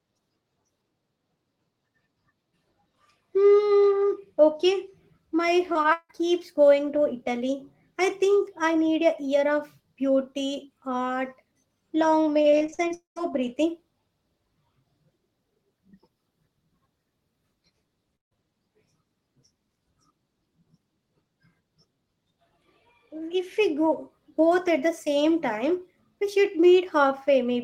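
From 5.73 to 6.11 s the speech breaks up with repeated packet loss, giving a robotic sound. Four gaps are patched by stretching the previous sound, the longest about 161 ms, so roughly half the span is concealed. On a spectrogram the harmonics turn into flat, smeared bands between cuts, and the waveform shows repeated, evenly shaped cycles instead of changing speech. The same fault returns from 12.42 to 12.92 s with seven shorter holes, none over 39 ms and about a third of the span filled. Here the spectrogram shows a fast, comb-like chopping pattern.

Immediately after, from 12.94 to 13.18 s, a long network dropout is the likely cause of a stretch where about 220 ms of audio is missing. The last sound is held as a fading buzz or hiss, then about 130 ms of near-silence follows before speech resumes further on. The waveform shows a decaying envelope followed by a flat line, and the spectrogram shows a dark gap after a thinning smear.

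At 18.16 to 18.37 s a burst of packet loss removes about 160 ms. The receiver holds the previous sound briefly and fades it out, leaving a short silence before the audio picks up later in the utterance. On the waveform this looks like a tapering tail and then a flat section. The spectrogram shows blurred, steady energy dissolving into an empty column.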